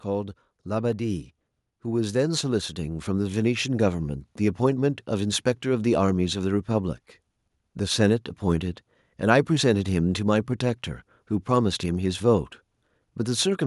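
From 1.83 s to 4.08 s the level climbs steadily, with the voice and the background noise swelling together by about 5 dB over those two and a quarter seconds rather than jumping at once. This is automatic gain rising: the gain control judged the incoming speech too quiet and pushed its amplification up gradually, so the room tone lifts in step with the voice instead of staying put beneath it.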